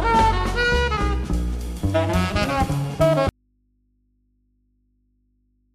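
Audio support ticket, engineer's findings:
Audio dropout to a faint residue from 3.29 s, runs to the end. Signal just cuts, no fade, leaving only mains hum way down, around 45 dB under the programme. Likely a break upstream with the input left open: path after it still live, so the hum is the open input picking up mains. Worth checking cable and connector first.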